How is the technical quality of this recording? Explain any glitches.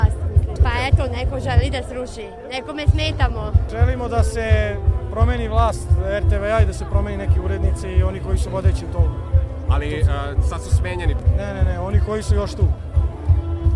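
No glitches or technical faults can be heard here.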